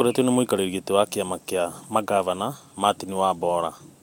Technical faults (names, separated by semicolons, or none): none